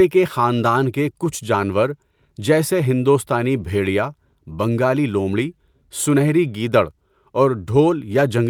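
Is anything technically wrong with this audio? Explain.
No, nothing here sounds technically wrong; the recording holds together from beginning to end without anything that calls for attention.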